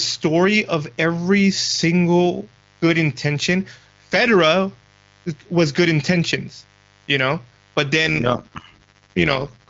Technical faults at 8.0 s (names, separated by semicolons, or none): mains buzz; overlap-add ripple